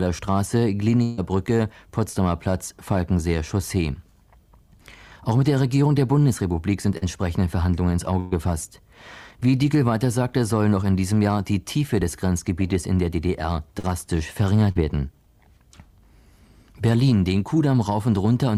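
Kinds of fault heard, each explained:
Burst of packet loss: Several consecutive packets failed to arrive in time, so the receiver had no real audio for a stretch and kept extending the last sound it had, turning it down as the gap went on. Near 1.03 to 1.19 s about 140 ms is replaced this way, and near 8.2 to 8.33 s about 120 ms. Each time the sound stretches into a fading held tone or hiss, then jumps ahead with that portion gone, never dropping to silence.
Short concealed packet loss: Around 40 ms of the stream at a time never reached the decoder, and the receiver patched each hole by continuing the preceding sound before blending back into the real signal. This happens at about 6.97 s, 13.79 s and 14.72 s, each patch lasting roughly 35 to 45 ms. The result is a brief smear or wobble in the flow of sound.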